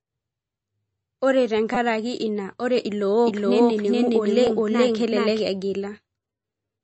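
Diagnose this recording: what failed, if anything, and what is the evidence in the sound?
Codec stage: the whole recording is band-limited with nothing above 8 kHz and has a watery, swirly texture, likely low-bitrate MP3 compression starving weak frequency lines, unlike a simple low-pass filter.

Driver or buffer stage: repeated buffer faults appear at 1.75 to 1.77 s as a brief buzz and at 4.47 s as a click. A roughly 5 ms block replays with hard joins and loses no audio, which separates these from dropouts.

Capture or mixing stage: from 3.26 to 5.40 s a doubled audio track runs about 0.4 s behind at equal level. It is full-band, dry and cuts in and out abruptly, unlike room echo, and likely comes from a second, slower capture path or an edit holding two copies out of step.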